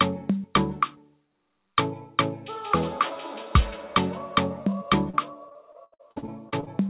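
Repeated packet loss (robotic sound) runs from 5.1 to 6.68 s: about a dozen holes, the longest 76 ms, each patched by stretching the last sound, leaving choppy audio with pieces missing, all capped near 4 kHz by the call path.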